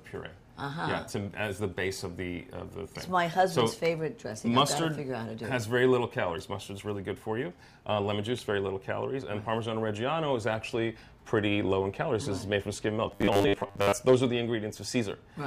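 From 13.12 to 13.93 s, robotic sound from repeated short buffers: a rigid 100 Hz buzz, likely from a 10 ms buffer looping while most incoming audio is skipped.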